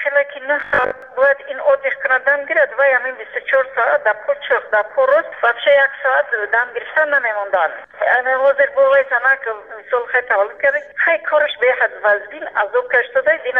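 From 0.60 to 1.02 s the sound collapses into a rigid, metallic buzz pitched at 50 Hz, loosely tracking the original contour but stripped of its natural texture. This is robotic sound from repeated short buffers, likely caused by fresh audio arriving too slowly, so the playback keeps recycling the last fragment instead. A 50 Hz buzz fits a fragment about 20 ms long, and roughly 70 percent of the stretch is repetition rather than new audio.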